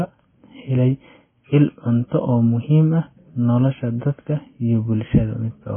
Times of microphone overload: none

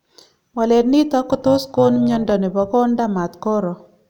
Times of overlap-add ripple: 1.30-2.32

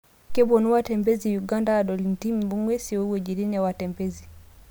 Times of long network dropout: none

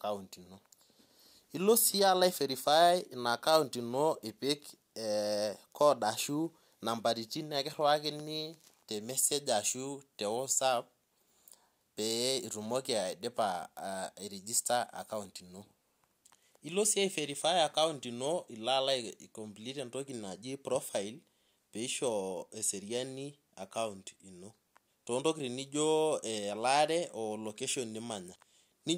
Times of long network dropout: none

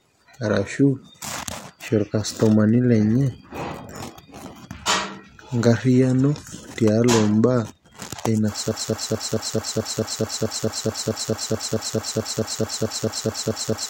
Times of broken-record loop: 8.71-13.90

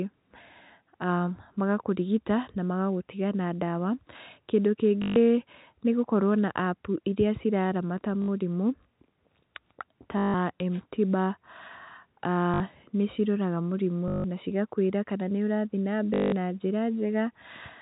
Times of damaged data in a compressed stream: none

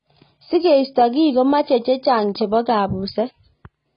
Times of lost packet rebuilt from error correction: none

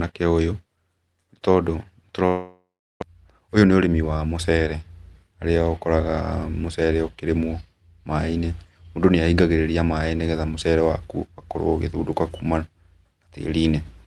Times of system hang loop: none

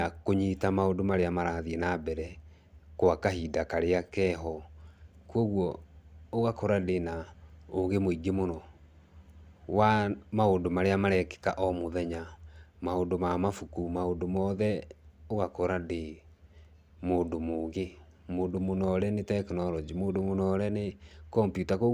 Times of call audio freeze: none

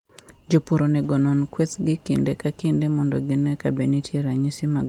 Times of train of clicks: none

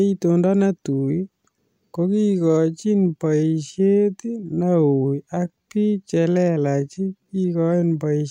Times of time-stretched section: 2.06-8.06

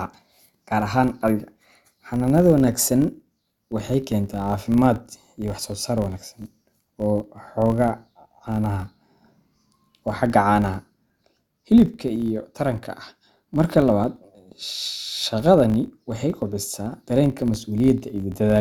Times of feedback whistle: none

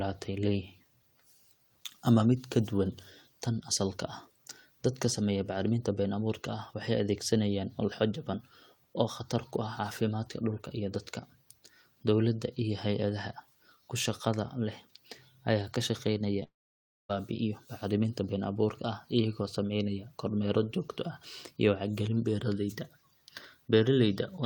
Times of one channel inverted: none

